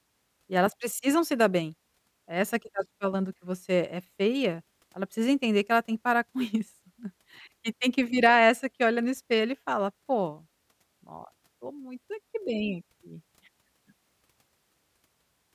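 Speech recording; no technical faults can be heard.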